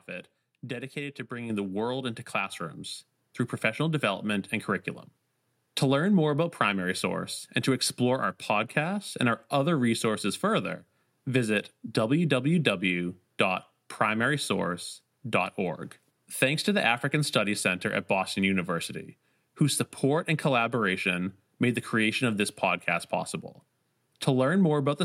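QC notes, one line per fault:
1.50 s and 2.52 s, microphone volume stepped up. The speech and the background noise jump louder together in a single step, by about 6 dB and then about 3 dB. The call software judged the microphone too quiet and raised its input volume twice.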